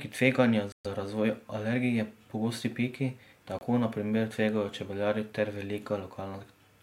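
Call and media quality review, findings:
Flat silence at 0.72–0.86 s (124 ms, before "razvoj alergije pogosti piki") and 3.59–3.63 s (24 ms, before "na primer tvegajo čebelarji"). Likely Bluetooth stall: headset buffer ran dry awaiting resent packets. Waveform shows silent gaps; spectrogram shows blank vertical bands.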